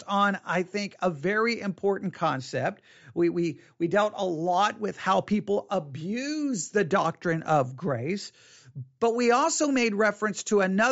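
No technical faults are audible.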